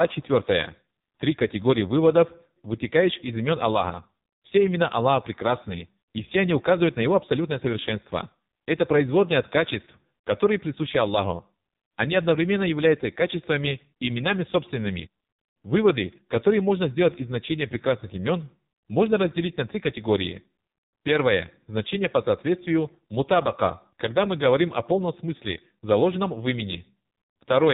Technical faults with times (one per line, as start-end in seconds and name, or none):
0.00-27.73 AMR narrowband mobile codec